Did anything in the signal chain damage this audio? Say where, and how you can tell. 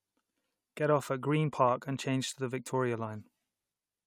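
No, nothing in this speech recording stood out on listening as damage from any stage of the signal chain.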